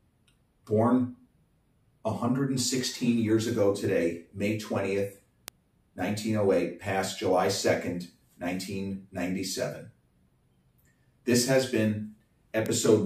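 At 2.79, 5.48, 11.60 and 12.66 s, single sharp ticks stand out as bit error spikes. A flipped bit throws one sample, or at 5.48 s a pair, off by a power of two before the next sample lands back on the waveform. Peaks reach about -23, -11, -17 and -11 dBFS. Unlike an edit or dropout click, nothing in the surrounding audio breaks or shifts. Each tick is a bare broadband impulse with no link to the signal.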